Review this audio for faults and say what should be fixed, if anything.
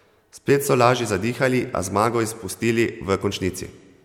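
No faults can be heard; nothing needs fixing.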